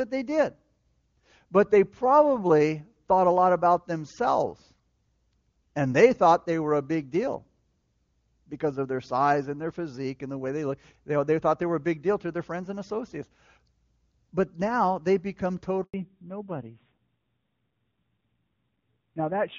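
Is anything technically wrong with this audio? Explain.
Yes, two faults. Just after "now they become", the speech cuts out for about 100 ms, from 15.84 to 15.94 s. This handover gap happens when the call switches networks and no frames arrive. From 15.94 s to the end, the speech turns duller and rougher, with nothing above 4 kHz. This is a fallback to narrowband: the clear AMR wideband (HD Voice) codec, consistent with its top rate, gives way to narrowband AMR at a rate that sounds like about 7.4 kbit/s.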